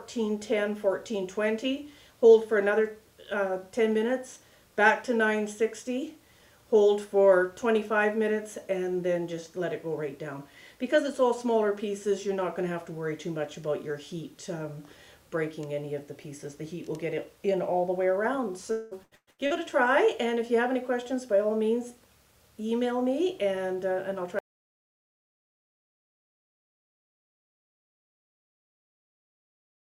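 The audio breaks up from 18.71 to 19.53 s with repeated packet loss, giving a robotic sound. Five holes are patched by repeating earlier sound, and the longest is 198 ms. Then there is an audio dropout to silence from 24.39 s to the end. It is complete silence, with no room tone, and the likely cause is a lost input.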